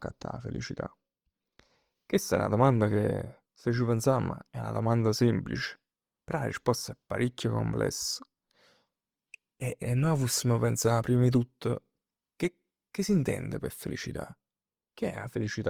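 A speech clip carrying Opus compression damage throughout, plainly audible as a rough, grainy texture rather than the swirling, hollow artefacts of MP3. Bandwidth stays full, reaching about 20.3 kHz. This is likely Opus music mode at a low rate, fitting roughly 24 kbps.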